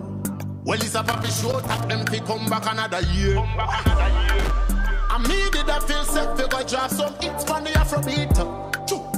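A worn or dirty contact kept making and breaking, producing loose connector crackle: an irregular scratchy burst from 1.06 to 1.84 s, then a shorter one at 4.39 to 4.51 s.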